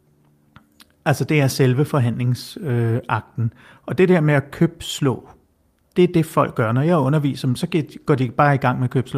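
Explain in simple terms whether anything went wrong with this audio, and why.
Nothing went wrong here.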